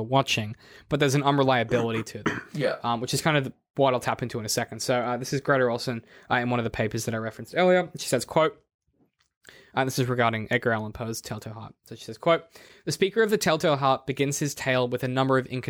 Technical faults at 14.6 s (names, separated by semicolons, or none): none